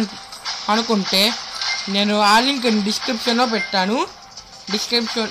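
From 0.69 to 1.28 s the audio hard clips. The signal is pushed about 8 dB past what the stage can pass, so the peaks are cut off flat. Those squared tops add high harmonics, and each loud moment in the span takes on a harsh, gritty fuzz. The same fault returns from 1.98 to 2.70 s at about 9 dB of overdrive, slightly heavier, with the same flattened peaks and the same rasp on the loudest parts.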